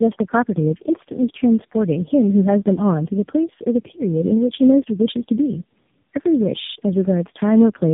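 Speech, with tandem speech coding running the whole way through. It sounds rough, muffled and warbly in a way no single link would cause, consistent with three low-rate speech coders in a row: a G.729A-style stage, then two AMR-NB passes around 7.4 and 7.95 kbit/s, bridged by G.711. Each coder re-encodes the previous one's damage, so the artefacts stack. Nothing reaches above 3.8 kHz, which fits a narrowband chain.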